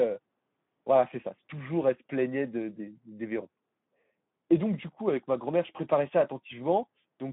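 From start to finish the speech carries plainly audible Speex codec damage, at a rate that fits about 11 kbps. With so few bits for the excitation, voices turn hoarse and noisy. The line band runs roughly 150 Hz to 3.7 kHz, with nothing above 3.8 kHz.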